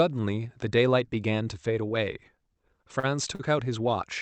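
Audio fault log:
2.99–3.05 s and 3.35–3.41 s, short stall from a late packet: a sound in the speech is briefly held too long, with a faint buzz or dip, for 38 ms then 41 ms. Late packets emptied the jitter buffer, so the last sound was stretched until they arrived. Nothing is lost; the speech after each stall simply runs later.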